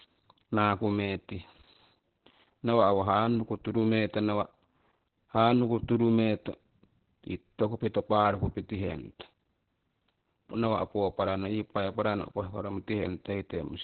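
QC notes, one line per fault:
Throughout: Opus voice compression, heavy damage. The speech stops at about 4.3 kHz, the narrowband limit Opus falls back to at very low rates, and the SILK linear-prediction coder renders the excitation so coarsely that voices sound muffled, hoarse and faintly robotic, which fits a bitrate around 8 kbps with 20 ms frames. A simple low-pass filter would only dull the top; here the voicing itself is roughened.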